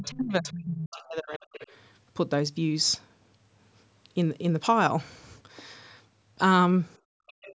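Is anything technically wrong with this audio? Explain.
Yes, there are three kinds of echo-canceller fault.

From 0.0 to 1.57 s there is speech suppressed in double talk: the talker dips sharply, by roughly 35 dB at worst, and breaks up. The likely cause is the canceller mistaking overlapping speech for echo and ducking everything. Unlike gating, it is the voice itself that is lost.

The other side's voice leaks through from 0.91 to 1.03 s, 1.29 to 1.67 s, and 7.27 s to the end. It is a faint second voice, roughly 20 to 25 dB under the talker, most likely loudspeaker sound the canceller failed to subtract. Suppression removes sound, but here extra sound is added.

From 6.98 to 7.36 s the background is gated by the echo canceller. The room tone drops by about 38 dB while the loudspeaker plays and then returns. This is a hard duck of the microphone that takes out the ambience, not the talker.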